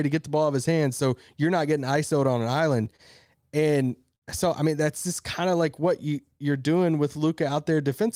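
From 2.85 to 4.24 s, after "on an" and before "so I mean that's", repeated stalls (stutter) occur: late packets emptied the jitter buffer eight times, and the last sound was held for up to 61 ms. The speech drags, and a spectrogram shows brief frozen, smeared patches.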